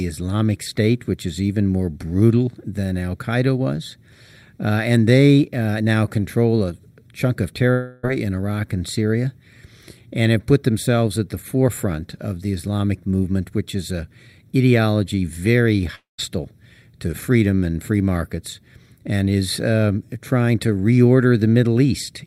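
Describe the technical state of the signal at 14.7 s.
At 14.7 s the speech signal is intact, with no audible fault at that moment.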